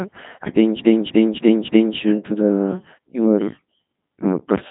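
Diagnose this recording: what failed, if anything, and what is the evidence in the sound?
Codec stage: a Codec 2 vocoder throughout. The speech sounds robotic and buzzy, with nothing above 3.8 kHz. The heavy damage fits roughly 2.4 kbit/s, where only pitch, voicing, energy and envelope survive and sine waves rebuild the voice.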